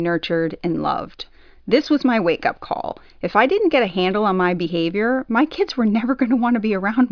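Speech recording with no audible technical faults.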